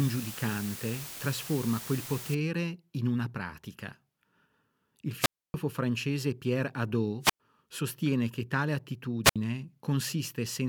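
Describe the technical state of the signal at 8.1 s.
At 8.1 s the speech signal is intact, with no dropout, distortion, glitch or other technical fault at that moment.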